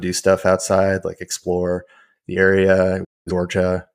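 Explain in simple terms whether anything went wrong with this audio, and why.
A digital broadcast dropout hits from 3.03 to 3.32 s, right after "like explore the area". The receiver stopped getting usable data, probably about five damaged frames, so it briefly faded to silence. Roughly 0.2 s of speech was lost, not just delayed.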